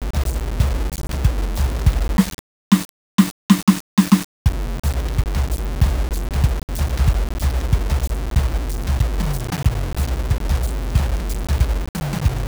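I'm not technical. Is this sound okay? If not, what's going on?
No. The music appears to have been stored with far too few steps to describe how loud it is at each instant, likely a case of low bit depth without dither: only about 5 bits, with every value simply rounded to the nearest step. That rounding error follows the music, so from start to finish there is a coarse, gritty fuzz riding on it, quite loud next to the music itself, roughest in quieter passages, where fading sounds break up or sputter.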